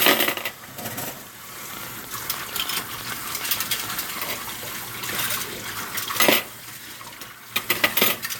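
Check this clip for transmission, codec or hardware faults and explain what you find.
There's one fault here, a train of clicks running from 1.74 s to 4.34 s. Around thirty near-identical pulses arrive at roughly 9.6 per second, unevenly spaced, and they spike around 10 dB above the surrounding sound. Something is repeatedly injecting the same sharp transient into the path, likely interference from nearby equipment or a faulty connection or power supply. You hear it as a stuttering tick-tick-pop laid over the audio, poking through the quieter gaps too.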